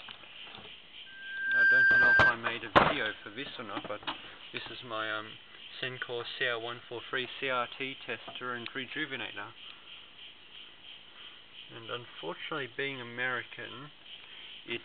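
From 1.06 to 2.34 s a piercing 1.6 kHz tone swells over about half a second to well above the sound: loudspeaker feedback squeal, where the microphone re-amplifies its own loudspeaker.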